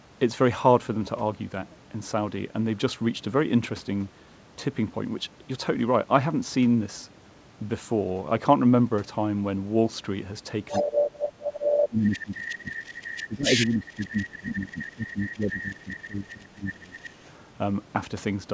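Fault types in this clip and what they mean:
Other side's voice leaking through: a second voice, about as loud as the talker near 10.7 s, then fainter until 17.3 s, likely uncancelled loudspeaker echo.
Speech suppressed in double talk: the talker dips by up to about 15 dB in stretches from 10.7 to 17.1 s, likely the echo canceller turning both sides down.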